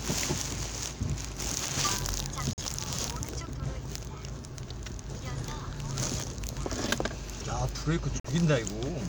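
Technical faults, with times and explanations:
2.53 to 2.60 s, corrupt frame muted: the sound drops abruptly into 70 ms of dead silence, then resumes in step. This fits one compressed frame failing to decode after bit damage, so the player put silence in its place rather than skipping ahead.
8.16 to 8.27 s, corrupt frame muted: a longer hole of about 110 ms, consistent with two adjacent damaged frames rejected by the decoder and replaced with silence, with the timeline kept.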